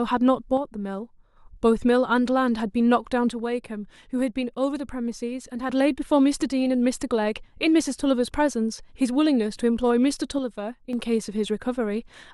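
Speech that suddenly drops in level by about 6 dB three times, from 0.57 to 1.36 s, from 3.30 to 5.70 s, and from 10.39 to 10.93 s, then snaps back to full level each time. The likely cause is one channel dropping out of a stereo source: once the channels are summed to mono, the speech common to both loses half its contribution, so it falls by about 6 dB, while anything carried only in the lost channel vanishes outright.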